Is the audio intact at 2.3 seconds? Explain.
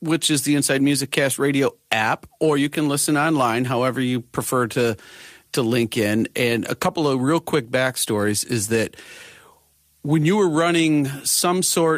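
Yes, the speech at 2.3 seconds is intact, with no dropout, click, distortion or other fault at that moment.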